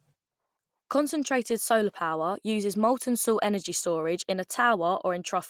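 Speech clip, no technical faults heard.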